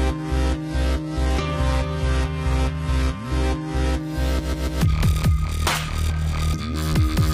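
For the first 4.0 s you're hearing an adaptive stream starting at a low bitrate: the top end is thin and partly synthetic with stronger codec smearing, which fits something like HE-AAC at 16 kbit/s. Then at 4.0 s it jumps cleanly to a fuller version, consistent with AAC-LC around 96 kbit/s, with no gap.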